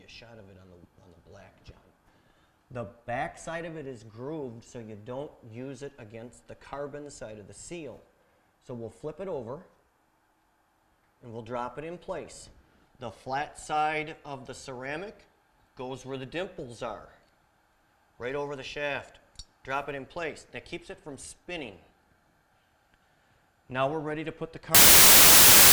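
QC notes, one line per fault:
24.75–25.73 s, samples built from the wrong bytes: the final second turns into loud, harsh broadband noise because sample bytes are misassembled, so rapidly changing low bits dominate each value. Unlike added hiss, it is loud and harsh rather than a faint steady floor.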